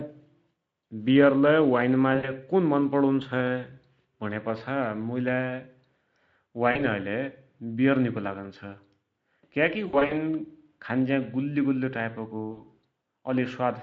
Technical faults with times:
2.15-2.32 VoIP packet loss concealed by the speech codec
6.71-6.86 VoIP packet loss concealed by the speech codec
9.87-10.15 VoIP packet loss concealed by the speech codec
12.51-12.63 VoIP packet loss concealed by the speech codec

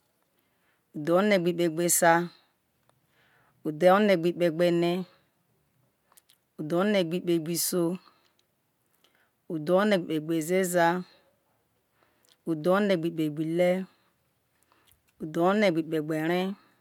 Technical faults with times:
none

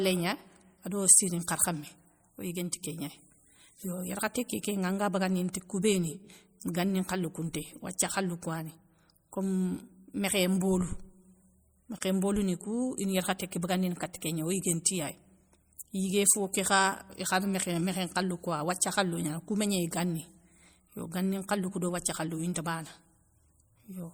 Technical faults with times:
0.00-24.14 MP3 compression
11.98-12.01 gap at a join of encoded pieces

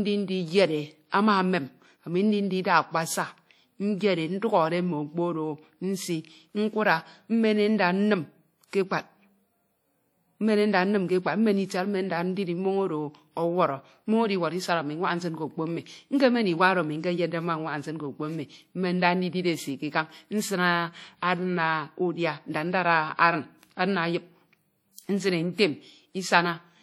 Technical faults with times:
0.00-26.83 WMA compression
1.10-1.12 pre-echo

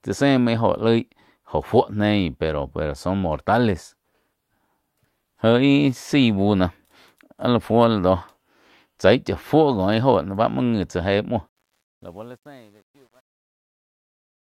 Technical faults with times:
11.49-14.48 truncation distortion on a fade

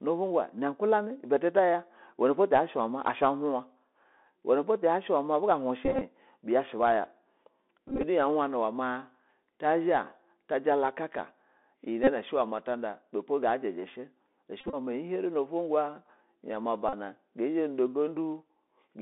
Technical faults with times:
0.00-19.02 Bluetooth CVSD headset codec
5.85-6.02 Bluetooth headset packet repeated
7.88-8.04 Bluetooth headset packet repeated
12.04-12.09 Bluetooth headset packet repeated
14.61-14.75 Bluetooth headset packet repeated
16.89-16.93 Bluetooth headset packet repeated

